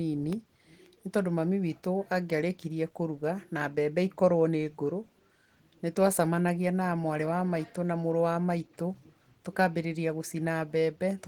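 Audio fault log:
Throughout: Opus voice compression in hybrid mode, plainly audible as a hoarse, slightly robotic edge on the speech. The lower band is coded by linear prediction with a coarse excitation, while the band above 8 kHz gets a thin transform layer, which fits a bitrate around 16 kbps with 20 ms frames. On a spectrogram, energy reaches about 20.3 kHz and stops dead, with blotchy, smeared texture above 8 kHz.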